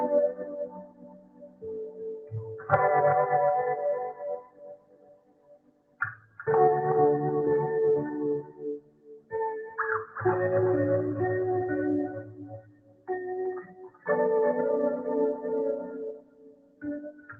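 A noise suppressor applied to music or sounds, a speech-tuned stage left running, swings the level by roughly 20 dB throughout, treating held tones and tails as noise. Onsets pass while sustained parts sink, so the audio pumps and thins. The sound is cut by the noise suppressor by up to about 17 dB at 0.32–2.32 s, 4.14–6.4 s, 8.77–10.16 s, 12.23–13.09 s, 13.62–14.06 s (about 16 dB) and 16.13 s to the end. The Opus call path adds its coding noise and an 8 kHz top end.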